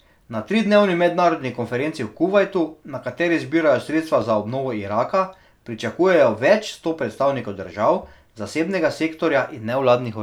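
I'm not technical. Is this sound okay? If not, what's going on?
No. Starting just after "tridnevni mednarodni" at 1.67 s, clicks recur about every 2.56 s until 9.33 s, likely clock drift buffer slips between two devices' clocks.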